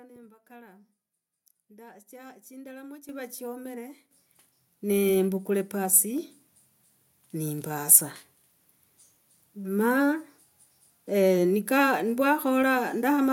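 Microphone volume stepped up at 3.09, 4.11 and 6.18 s: software lifted the input gain abruptly by about 10, 8 and 3 dB, so the speech and background jump louder together.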